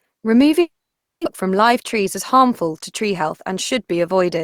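Speech, interrupted from 0.61 to 1.27 s: the last sound decays into a brief fading buzz, 0.53 s of silence follows, and 0.6 s of speech never returns, likely a long network dropout.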